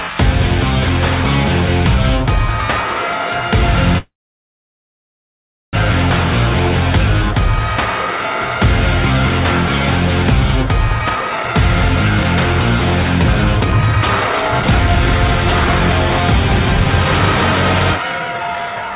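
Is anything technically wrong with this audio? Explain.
Yes. There are two kinds of fault, heard against a narrowband sound with nothing above 4 kHz, which fits a G.711 mu-law call codec.

Call audio freeze, 3.98 to 5.75 s: the sound hangs for about 1.75 s. A short smeared continuation of the last sound quickly dies away into about 1.63 s of silence, and then the audio resumes exactly where it stopped, with nothing skipped. The likely cause is packets stalling in transit until the jitter buffer ran dry, while the receiver padded the wait and then played the late audio in full. That leaves the rest of the clip running about 1.75 s later than before.

Jitter buffer speed-up, 11.00 to 11.83 s and 13.61 s to the end: the pitch stays the same but the audio suddenly feels rushed. The first stretch plays at 147% speed, which is sharply hurried. The second runs at 119% through to the end, a milder but sustained pressing forward. 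The receiver's buffer was holding more audio than its target, so it trimmed many tiny pitch-period slices in succession. It cut about 0.4 s in the first stretch and roughly a second in the second, pulling the delay back down.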